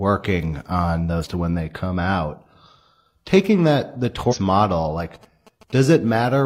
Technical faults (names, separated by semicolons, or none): damaged data in a compressed stream; GSM signalling bursts